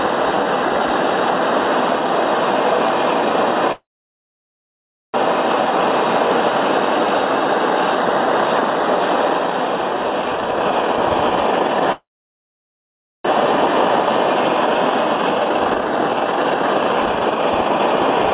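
At 3.72 s the sound stops and a call audio freeze sets in. A brief smeared continuation of the last sound fades, then about 1.3 s of silence follows until 5.16 s. The likely cause is packets held up in transit while the jitter buffer ran dry. Unlike a dropout, nothing is lost. The audio resumes exactly where it broke off, about 1.4 s late. The same pattern recurs from 11.92 to 13.26 s, with roughly 1.2 s of silence and a delay of about 1.3 s.

Between 10.35 and 11.86 s a jitter buffer speed-up plays the sound at about 150% speed, cutting roughly 0.7 s. From 13.66 s to the end, a second speed-up runs at about 141% and removes around 2 s. The receiver trims pitch-period-sized slices to drain the excess buffered audio, so the sound seems hurried yet keeps its pitch, which distinguishes it from a sped-up playback that also raises pitch. The whole clip is band-limited to 4 kHz, which fits 64 kbps G.711 mu-law on the call path.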